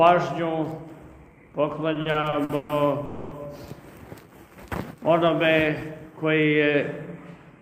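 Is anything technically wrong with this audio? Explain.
Yes, there are two network-related faults.

From 1.93 to 2.72 s there are repeated stalls, a stutter. The audio halts seven times, with the longest halt about 140 ms. Packets were reaching the receiver late, and its jitter buffer kept running dry. Each time, the last sound was extended to bridge the wait. About 340 ms of filler was inserted, 43% of that stretch. Nothing is lost, but the passage drags and stutters.

From 3.05 to 3.34 s there is a call audio freeze. The sound stops moving forward and the last moment is held as a continuation for about 260 ms. It never drops to silence. Then the audio resumes where it stopped, now 260 ms later than before. The likely cause is packets held up in transit, emptying the jitter buffer until they arrived.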